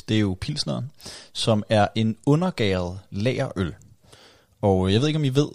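No technical faults can be heard anywhere in the speech. Nothing in the recording stands out for comment.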